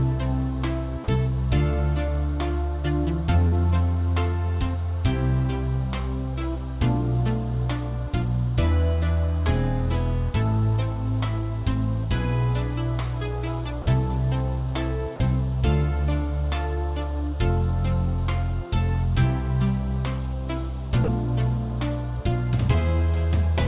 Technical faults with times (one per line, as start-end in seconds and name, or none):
1.04-1.08 sound dropped by the voice detector
3.48-3.54 short concealed packet loss
13.82-13.86 sound dropped by the voice detector
15.16-15.20 sound dropped by the voice detector
21.04-21.08 sound dropped by the voice detector